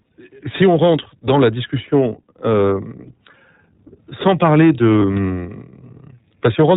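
Throughout the clip the speech carries the iLBC codec's narrowband character: nothing above 4 kHz survives, and the voice sounds plainly rough and slightly synthetic. Each frame's excitation is coded independently, in iLBC's 15.2 kbps, 20 ms frame mode.

At 5.00 to 5.03 s there is a lost iLBC frame, a 20 ms gap. The decoder fills it by repeating the last pitch cycle mixed with noise, heard as a brief buzzy, held vowel sound. Because iLBC frames are self-contained, normal decoding resumes almost at once afterwards.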